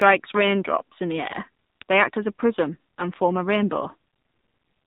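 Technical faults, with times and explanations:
Throughout, AMR narrowband mobile codec: the speech is squeezed into a phone-line band with nothing above 4 kHz, and has that buzzy, synthetic edge of a vocal-tract model rebuilding each 5 ms from a few pulses, which fits a low mode around 7.4 kbps.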